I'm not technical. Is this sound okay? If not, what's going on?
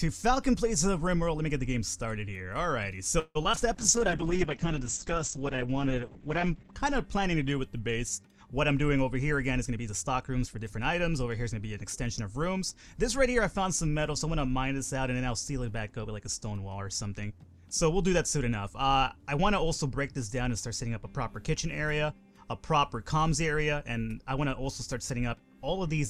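No, the sound has several problems, all typical of an internet call struggling with its connection.

Around 3.19 to 3.37 s there is a call audio freeze. The pieces of audio travelling over the network were likely held up, and the receiving end ran out of sound to play. It stretched the last sound for about 0.16 s, trailing into a brief silence. Then the audio carried on from where it stopped, so nothing is lost, just a small pause inserted.

Just after, at 3.43 to 3.46 s and again at 3.55 to 3.58 s, there is short concealed packet loss. Each time about 20 ms of audio never arrived in time. The receiver patched the hole by imitating the preceding sound, heard as a tiny smear or wobble.

Between those two patches, at 3.52 to 3.55 s, there is a skip ahead. A small stretch of audio, well under a tenth of a second, was dropped while later audio was already waiting. Playback jumps straight forward, joining the two sides almost seamlessly.

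From 3.76 to 6.79 s there is a call bitrate drop. The call judged its connection had become poor and squeezed the audio into far less data for nearly 3 s. The sound turns rough and muffled, losing everything above about 8 kHz, until quality returns.

From 3.99 to 4.88 s comes a jitter buffer slow-down. Running short of stored audio, the receiver repeated tiny slices over and over to build a reserve, adding about 67 ms. The sound plays at about 93% speed, slightly drawn out but at the same pitch.

From 9.11 to 10.79 s there is a jitter buffer speed-up. The receiver had stored more audio than it wanted, so it trimmed many tiny slices, about a sixth of a second in total. The sound runs at about 109% speed, slightly hurried but at the same pitch.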